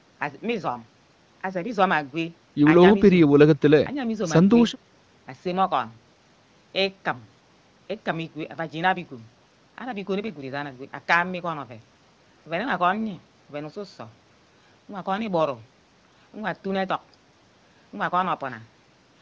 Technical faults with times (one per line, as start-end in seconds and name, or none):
none